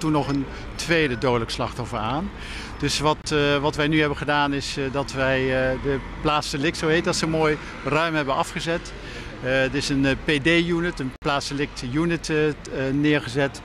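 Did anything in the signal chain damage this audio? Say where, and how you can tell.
Yes. The sound drops out twice: a brief hole from 3.22 to 3.24 s (20 ms) and a longer one from 11.16 to 11.22 s (60 ms). Each is a block of digital silence, with audio cut straight to silence and back with no fade. That points to the driver or buffer stage, where the output buffer wasn't filled in time and zeros went out in place of audio.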